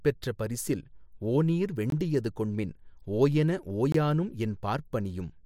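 Two short holes interrupt the speech, at 1.90–1.92 s and 3.92–3.94 s, each about 21 ms. This is a gap between chunks: silence inserted at each join of 2-second chunks.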